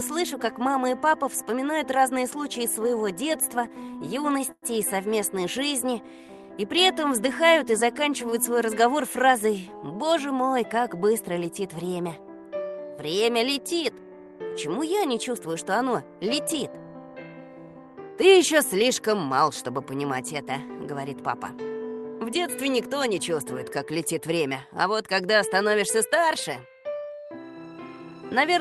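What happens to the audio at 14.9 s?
Nothing goes wrong at 14.9 s; the audio there plays through intact, with only the steady coding character and upper band limit of the call path that runs through the whole clip.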